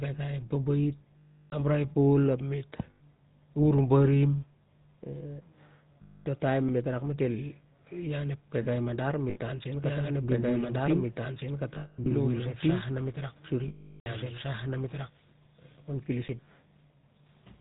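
The whole clip passes through the GSM full-rate codec. Nothing above 4 kHz survives. The speech has the typical buzzy, gravelly roughness of the codec. It comes from a coarse pulse-driven model of the vocal tract, which fits a 13 kbps full-rate stream.

Lost GSM frames first appear from 1.18 to 1.54 s. Further losses follow at 2.90 to 3.01 s and 6.02 to 6.27 s. Each time the decoder repeats the last good frame. The sound holds as a rough, metallic ring.

At 6.69 s comes an underrun with held sample. The output buffer empties for about 5 ms. The converter holds its last value, so the waveform goes flat. Some live audio is lost, and the sound stops with little or no click.

More lost GSM frames follow at 9.30 to 9.38 s.

From 9.84 to 15.1 s a doubled audio track is heard. A full-band copy about as loud as the original trails by roughly two seconds. It has no decay or room colour and starts and stops abruptly. 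A second, slower capture path is the likely cause.

Within that stretch, frame losses from 11.74 to 12.07 s come as scattered bursts. The longest run is around 200 ms. A longer loss at 13.68 to 14.07 s lasts 380 ms. There the metallic ring is cut to silence.

A second underrun with held sample falls at 16.28 s. The gap is 10 ms. The level freezes, then audio resumes where material was skipped.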